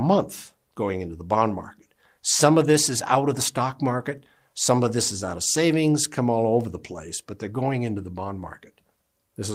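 No technical faults are audible.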